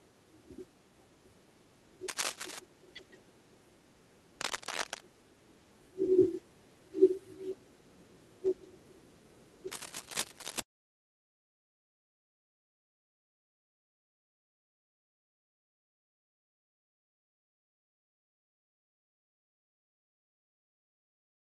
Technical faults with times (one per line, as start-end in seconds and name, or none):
2.08-2.59 cable scratch noise
4.41-5.02 cable scratch noise
9.71-10.60 cable scratch noise